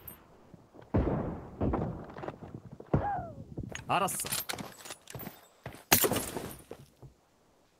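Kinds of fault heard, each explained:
Comfort noise in place of the background: steady, featureless hiss replaces the real background in pauses, likely from discontinuous transmission. Its unchanging texture, not a clean dropout, distinguishes it from gating.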